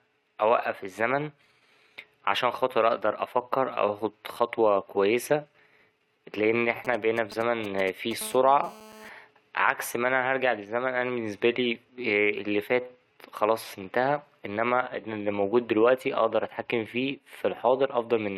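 A galloping dit-dit-dit of short 217 Hz buzzes, roughly 15 dB under the speech, runs from 6.70 to 8.13 s: GSM signalling bursts from a nearby 2G phone, rectified by the audio circuit. From 8.21 to 9.09 s comes a steady, raspy 217 Hz buzz rich in harmonics, about 20 dB below the speech: GSM phone buzz, as that phone's call transmission is rectified.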